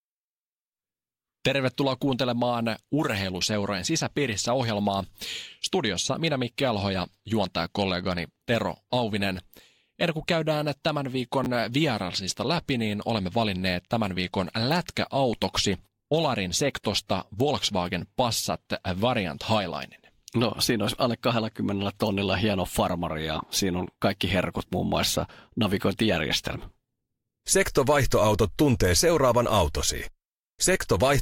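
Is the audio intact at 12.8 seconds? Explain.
Yes, the speech at 12.8 seconds plays through intact, with no dropout, click, distortion or other fault at that moment.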